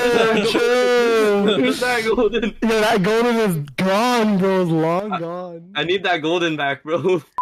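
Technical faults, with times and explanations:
No technical faults, with times or otherwise, can be heard in this clip.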